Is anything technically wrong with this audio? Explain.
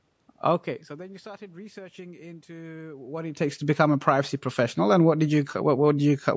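No, nothing technically wrong stood out on listening to this speech.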